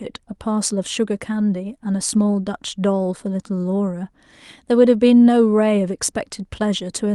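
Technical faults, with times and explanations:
The speech comes over a WebRTC call path with its high end rolling off at about 12 kHz, consistent with Opus coding at a moderate bitrate, and no technical faults can be heard in the signal.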